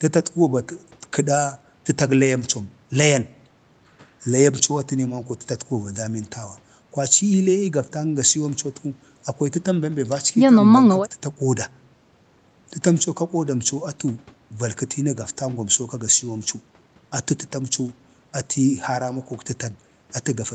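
No technical faults are audible.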